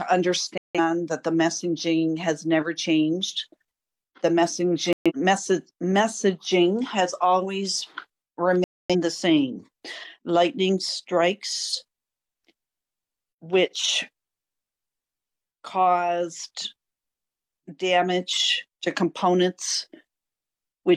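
Digital broadcast dropouts occur at 0.58 to 0.80 s, 4.93 to 5.12 s and 8.64 to 8.95 s. Each time, the receiver stopped getting valid frames and muted until good ones arrived, so the sound drops abruptly to silence and resumes further on. About 170 ms, 128 ms and 256 ms of programme are lost. Those spans fit roughly four, three and six missing frames.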